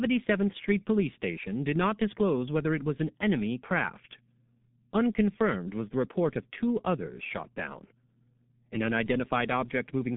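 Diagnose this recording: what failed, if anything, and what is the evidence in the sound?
Codec stage, throughout: G.723.1 codec. Coarse 30 ms frames blur consonants and leave the speech muffled and hoarse; the spectrogram is empty above 3.7 kHz, which fits a 6.3 kbit/s coder.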